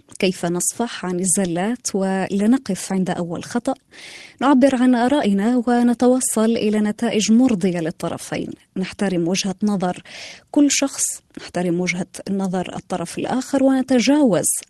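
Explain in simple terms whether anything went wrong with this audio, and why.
Nothing went wrong with this audio: the speech came through a normal internet call connection and nothing in it was disturbed along the way.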